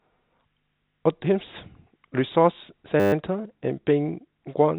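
From 3.0 to 3.13 s a system hang loop occurs: the host or driver stalled while the audio hardware kept replaying one 10 ms ring buffer, repeating it 13 times. At a 100 Hz loop rate, this produces a steady buzz, with the band-limited call audio, nothing above 4 kHz, surrounding it.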